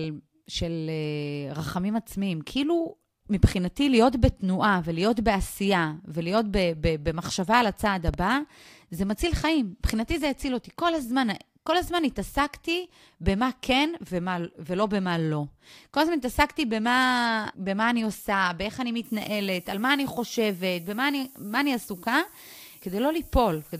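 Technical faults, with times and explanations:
8.08–8.17 s: loud pop. Two sharp pops arrive in quick succession, peaking roughly 15 dB above the speech, which carries on underneath. The likely cause is a sudden voltage step, such as from a plug, switch or static discharge, shaped by the downstream circuitry.
19.04–23.80 s: low bit depth with noise shaping. A steady, thin hiss sits roughly 20 dB below the speech and rises sharply toward the top of the band. The coarse rounding fits 8-bit quantisation, with the error pushed up into high frequencies.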